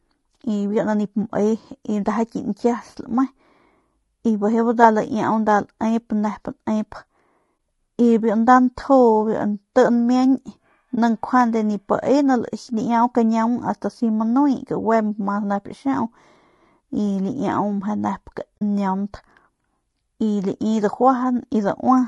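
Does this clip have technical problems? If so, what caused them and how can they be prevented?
Yes. Throughout the speech there is a rough, grainy quality, with noise filling the gaps between pitch harmonics and a thin, somewhat synthetic top band. This is most likely low-delay AAC compression of the AAC-ELD kind used for video calls. Its short frames cannot separate closely spaced harmonics well, and the damage is plain enough to suggest a low bitrate near 32 kbps. On a spectrogram, the harmonic stripes look smeared, with speckled energy between them and a blotchy upper band. Allowing a higher bitrate for the call codec would prevent this.

The audio also drops out three times, at 7.57 to 7.59 s (just before "y biu nda"), at 10.95 to 10.98 s, and at 18.58 to 18.62 s. These are AAC frame loss with muting. The decoder received nothing for those stretches and output silence, which points to one lost frame in each of the first two gaps and two in the last. 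The overlapping windows fade the sound out and back in, so the first two gaps are brief dips and the last is a soft-edged hole. A waveform shows a brief tapered pinch to near-zero, and a spectrogram shows a thin vertical blank band across all frequencies. A steadier network path with packet-loss concealment or redundancy would prevent these dropouts.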